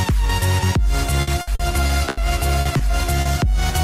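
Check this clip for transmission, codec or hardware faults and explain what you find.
Two kinds of transmission fault appear, both from lost packets being concealed by the decoder.

Repeated packet loss (robotic sound) runs from 1.21 to 2.19 s. Six gaps, the longest 80 ms, were patched by extending earlier sound, about 29% of that stretch. It sounds choppy, with pieces missing. A spectrogram shows repeated, smeared harmonic blocks with abrupt seams.

Short concealed packet loss occurs at 2.61 to 2.67 s (40 ms filled), 2.77 to 2.81 s (20 ms) and 3.21 to 3.27 s (40 ms). Each hole was bridged by continuing the preceding sound, heard as a brief smear or wobble. The waveform shows a flattened, overly regular patch.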